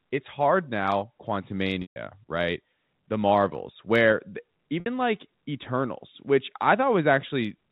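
Speech over a telephone line, band-limited to 4 kHz by G.711 coding, breaks up twice from packet loss with pitch repetition. At 1.82 to 1.96 s, about 140 ms of audio is missing. The receiver repeats the last pitch period, which fades out over roughly 50 ms into silence. The speech then returns through a short cross-fade. At 4.80 to 4.86 s, a 60 ms gap is bridged the same way and sounds like a brief, held, buzzy tone. The gap lengths fit seven and three lost 20 ms packets.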